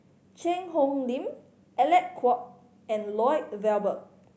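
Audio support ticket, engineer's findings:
Speech signal shows the expected call microphone processing, with the lowest bass rolled off by its high-pass filter and no content above 8 kHz, and no faults found.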